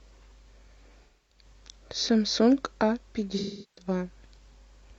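AAC frame loss with concealment at 1.03–1.44 s and 3.38–3.87 s: the decoder repeats the last good spectrum, smearing the speech into a noisy or phasey patch lasting about a quarter and a third of a second.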